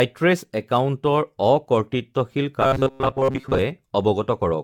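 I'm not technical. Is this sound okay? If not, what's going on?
No, there are two problems.

From start to finish the speech sounds swirly, smeared and hollow, and the starts of sounds are blurred. This is likely generation loss: the audio was saved in a compressed format and then re-saved many times, around ten passes, and each pass adds small errors. Unlike a single low-quality save, the damage has built up into a watery, phasey texture.

From 2.62 to 3.58 s the voice turns into a rigid, metallic buzz. It still roughly follows the speech but carries a steady buzz of about 134 Hz. This is robotic sound from repeated short buffers, likely caused by new audio arriving too slowly, so the software kept replaying the last tiny slice, about 7.5 ms long, and skipped most of the real sound in that stretch. The fixed pitch, and the fact that it is confined to that stretch, tell it apart from the constant smearing of generation loss.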